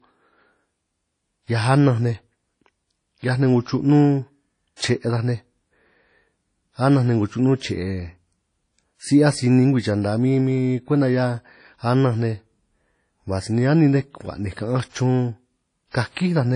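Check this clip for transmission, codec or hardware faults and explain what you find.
Two faults here: codec damage through the whole clip, plus one pre-echo near the end.

Throughout, the speech has a ringing, washy quality, with a hiss that swells and fades along with the talker, and nothing above about 10.1 kHz. That points to a transform codec like WMA compression, likely WMA version 1 at a low rate, something like 32 kbps. Long transform blocks smear the quantisation noise over tens of milliseconds, and weak spectral detail gets thrown away entirely, so the damage is plainly audible.

At 15.91 to 15.94 s there's a pre-echo: a brief hiss arriving about 38 ms ahead of a sharp attack, which then lands soft and smeared. A sudden onset fell late in a codec block, and the noise budget sized for that loud moment got spread evenly across the whole block, including the quiet stretch just before it. 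That's why you hear the fuzz before the hit.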